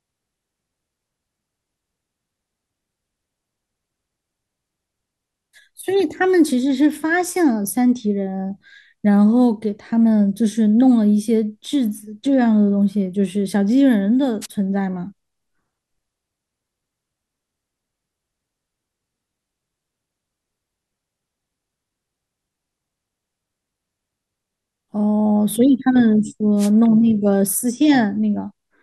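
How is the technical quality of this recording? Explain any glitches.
The speech is marred by two wireless microphone noise hits, at 14.41 to 14.46 s and 26.57 to 26.70 s. Each is a brief swish of static as the FM radio link fades through cancelling reflections and receiver hiss rises over the voice. A digital dropout would leave silence or a frozen fragment, but here noise fills the gap.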